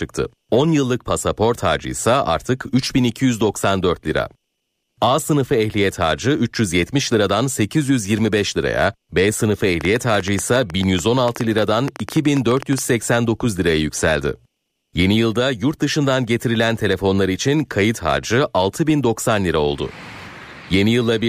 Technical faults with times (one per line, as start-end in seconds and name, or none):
9.81-12.79 train of clicks